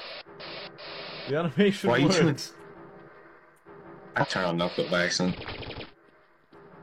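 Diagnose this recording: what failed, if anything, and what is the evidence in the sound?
The codec stage failed: there's damaged data in the compressed stream. Around 4.18 to 4.25 s you get a brief glitch, roughly 70 ms long, where the decoder hit corrupted frames, lost sync and had to hunt for the next valid frame header before carrying on.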